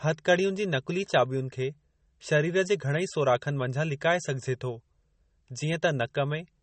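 Throughout the speech, nothing is heard above about 8.4 kHz. The sound is watery and swirly, with chirping on s sounds and smeared attacks. This is likely MP3 compression, where the encoder ran short of bits, which fits a bitrate near 32 kbps.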